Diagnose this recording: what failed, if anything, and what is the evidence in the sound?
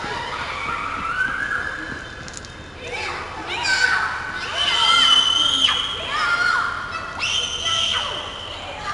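A gritty hiss rides on every loud passage throughout the clip and rises and falls with the level, while sharp attacks come out roughened. Nothing is present above about 10.7 kHz, so the top end is dull. The failure sits at the codec stage: 4-bit ADPCM compression. Each sample is coded as a coarse step from a prediction, which leaves level-tracking noise and lets transients outrun the adapting step size. The ceiling points to a sample rate near 22 kHz, which fits a rate of about 89 kbps.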